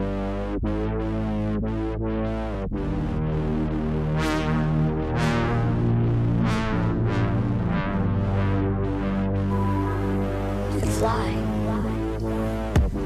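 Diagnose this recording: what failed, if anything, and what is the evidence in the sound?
Nothing here points to a failure anywhere in the chain; the sound holds steady the whole way, with no dropouts, glitches or shifts that would implicate any stage.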